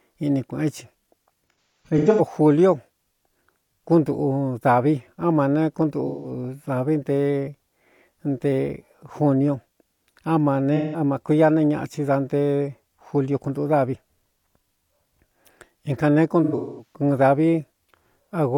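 Speech, with four patches of AAC frame loss with concealment at 1.63–2.21 s, 6.07–6.31 s, 10.76–11.00 s and 16.44–16.95 s. The first patch loses about 430 ms of audio scattered across roughly 680 ms, with the longest gap around 150 ms. The middle two are single 170 ms gaps. The last loses about 300 ms over 340 ms, with the longest gap around 200 ms. The decoder bridges each gap by reusing the last intact spectrum with randomised phase, so these stretches sound smeared, noisy and phasey.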